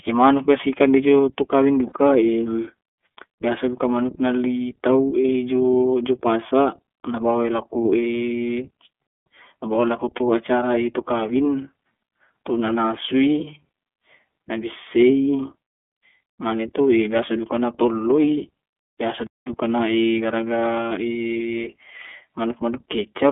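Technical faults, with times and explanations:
Throughout, iLBC codec: the speech is confined to roughly 250 Hz to 3.4 kHz and sounds rough and slightly synthetic, which fits iLBC at about 13.33 kbps with 30 ms frames, each frame's excitation coded independently and audibly coarsened.
1.89–1.92 s, 5.22–5.25 s and 10.16–10.21 s, lost iLBC frames: each gap is about 30 ms, consistent with one dropped frame. The decoder repeated the last pitch cycle with added noise, giving a brief buzzy held vowel. Speech recovers immediately, as before "jo jo".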